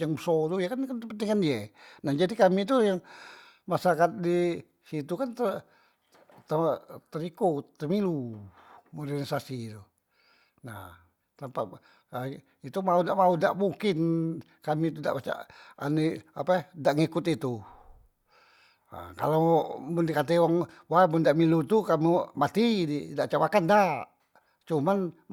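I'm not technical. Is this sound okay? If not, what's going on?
Yes, nothing stood out as a problem when listening to this speech recording.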